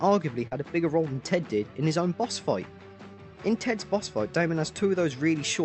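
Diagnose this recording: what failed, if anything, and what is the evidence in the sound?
The network stage failed: there's short concealed packet loss at 0.47 to 0.53 s, a quick smear where about 40 ms of audio never arrived in time. The decoder papered over it by extending the previous sound, then blended back into the real stream. The call codec's top end stops around 8 kHz.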